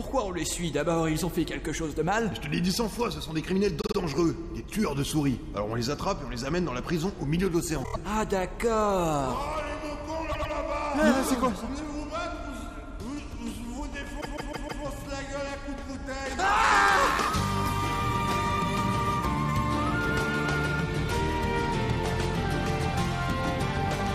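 Repeated frames make the audio stutter at 3.80, 7.83, 10.31 and 14.20 s. Blocks of compressed frames lasting 26 to 157 ms were written more than once, so each replays two to four extra times. The longest burst adds 0.63 s.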